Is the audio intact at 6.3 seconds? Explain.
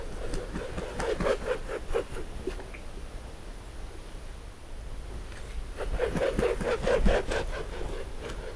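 Yes, the audio is intact at 6.3 seconds, with no audible fault at that moment.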